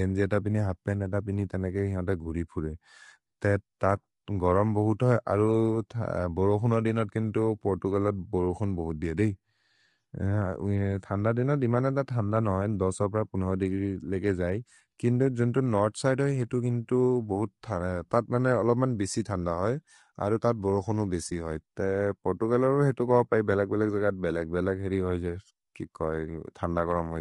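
All the way through, the speech has a rough, grainy texture, with hiss creeping in between the harmonics and an artificial-sounding top end. That's most likely low-delay AAC compression, AAC-ELD style. Its short frames can't resolve pitch detail well, and the damage is plainly audible at what sounds like around 32 kbps.

At 21.29 to 21.32 s there's a brief dip: the sound fades out and back in. That's AAC frame loss with muting. The decoder zeroed the missing spectrum, and the overlapping windows smoothed the edges, which fits a single lost 20 ms frame.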